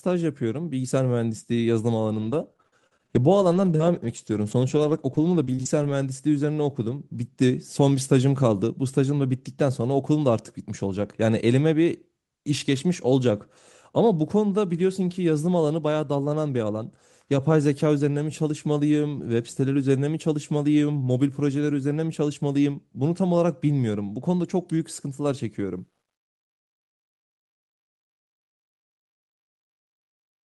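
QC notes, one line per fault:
2.17 to 5.91 s, scattered short gaps: about ten small dropouts, the longest around 40 ms, each patched by extending the preceding sound, leaving brief ticks and smears. A spectrogram shows short smeared or repeated slivers; the waveform shows tiny discontinuities at the joins.
25.59 to 30.46 s, truncation distortion on a fade: the fade-out starting around 25.6 s lands on only about 11 bits with no dither, so low levels collapse into coarse square steps. From 27.70 s it turns gritty; the waveform shows visible staircasing, the spectrogram broadband grit.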